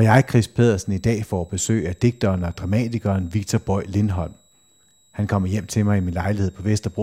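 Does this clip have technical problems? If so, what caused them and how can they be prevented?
Yes. A switching supply whistle runs through the whole speech clip: a faint high tone near 4 kHz, wandering between about 3.74 and 3.94 kHz, sitting roughly 40 dB below the speech. A nearby switch-mode power supply dropping into an audible burst mode, or beating against another supply, leaks this whine into the audio path. On a spectrogram it shows as a thin, slightly drifting horizontal line; the waveform barely shows it. Powering the gear from a linear or well-filtered supply prevents it.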